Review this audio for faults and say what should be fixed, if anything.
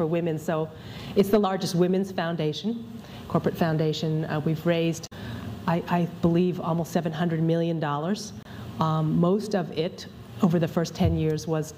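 Damaged data in a compressed stream occurs at 5.03 to 5.13 s and again at 8.43 to 8.47 s, about 96 ms and 44 ms long. At each point part of the compressed data was lost, zeroed, overwritten or mixed with other data. The decoder misread or rejected those frames, lost sync and searched for the next valid frame header, which breaks the sound with a brief chirp, squawk, click or short gap. Both spots need repair from an intact copy of the source. To prevent it, transfer and store the stream over a checked path, such as one with checksums or CRC-verified frames, and keep metadata such as stream titles out of the audio payload.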